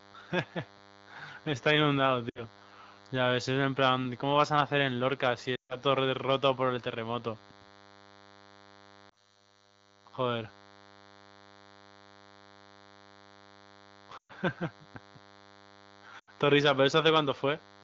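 Throughout the clip a thin, steady DECT cordless phone buzz sits about 30 dB under the speech. A nearby handset or base is bursting every 10 ms, and the audio circuit rectifies those pulses into a 100 Hz tone with a dense comb of harmonics. That harsh, gritty edge sets it apart from smoother 50 or 60 Hz mains hum.

Lost AMR speech frames break through at 2.29–2.42 s, 5.55–5.76 s, 9.09–9.41 s, 14.17–14.32 s and 16.19–16.30 s. Frames failing their checksum force the decoder to reuse the last pitch and vocal tract settings at falling gain. Rather than a hard cut, each multi-frame run drops to near silence within two frames. The 5.55 s run is the longest gap at 140 ms, while 9.09 s is only a brief dip. Each time, the speech resumes weak or rough within the light AMR-WB coding.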